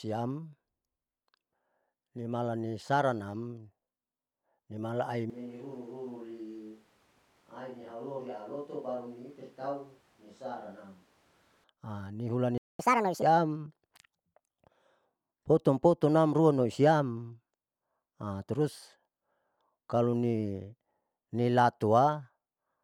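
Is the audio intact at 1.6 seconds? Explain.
Yes, the speech at 1.6 seconds plays through cleanly with no audible fault at that moment.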